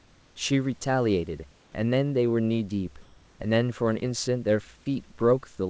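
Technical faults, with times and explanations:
3.02 to 3.40 s, comfort noise in place of the background: For 0.38 s, the room background in the pause changes character. Its natural detail drops away and a steady, featureless hiss takes over. The level shifts by only about 1 dB, and the background sits about 31 dB below the loudest sound, so the swap is subtle. The likely cause is discontinuous transmission: the sender paused, and the receiver filled the gap with synthetic noise. Nothing above 8 kHz is heard, which fits a G.722 call path.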